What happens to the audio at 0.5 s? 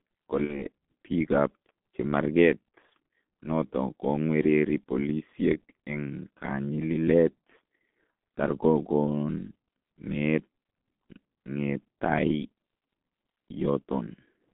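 Right around 0.44 to 0.65 s there's a dropout handled by VoIP packet loss concealment in the speech codec. About 60 ms of audio went missing, which fits two lost 30 ms frames. The decoder filled the gap by carrying its last pitch and filter settings forward and turning the gain down frame by frame. So the sound smears into a buzzy tone or a coloured noise that fades, and it stays weak or distorted for tens of milliseconds or more after about 0.65 s while the decoder's state catches up.

All of that sits on top of the G.723.1 codec damage that runs through the whole clip. The band is squeezed to roughly 200 to 3400 Hz, and the coding is very coarse, consistent with a codec running at around 6 kbit/s. With 30 ms frames and a voice model that updates slowly, the speech comes out muffled and hoarse, and the consonants are blurred. You can hear that at 0.5 s as well.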